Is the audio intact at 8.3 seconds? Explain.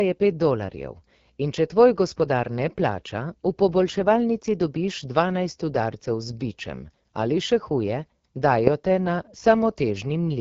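No. At 8.3 seconds, as everywhere in the clip, the speech has passed through the AMR wideband (HD Voice) codec at a very low rate, probably its 8.85 kbit/s mode. Too few bits go to the pulse model behind the speech up to 6.4 kHz, so it sounds rough and raspy.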